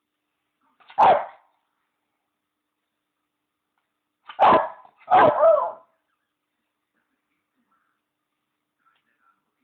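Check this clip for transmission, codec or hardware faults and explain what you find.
No transmission, codec or hardware faults were found.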